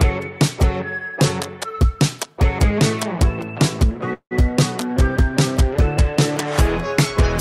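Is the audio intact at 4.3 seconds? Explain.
No. At 4.3 seconds the clip is inside a call audio freeze running from 4.13 to 4.33 s. The preceding sound is stretched into a fading buzz or hiss that fills about 174 ms, the last roughly 80 ms of it silence, most likely because late packets left the jitter buffer empty. Unlike packet loss, nothing is cut out. The audio resumes exactly where it stopped, so everything afterwards simply arrives 174 ms later.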